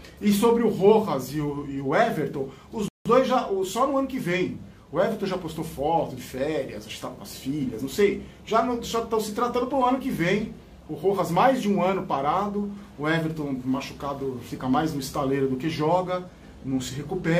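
A single rebuffering stall interrupts the audio from 2.88 to 3.06 s. Playback runs out of downloaded data, falls silent for about 0.17 s, then picks up exactly where it left off, so nothing is skipped but the clip is that much longer. On a waveform it shows as a flat line at zero; on a spectrogram, a clean full-height blank column, with the sound on either side joining without any missing material.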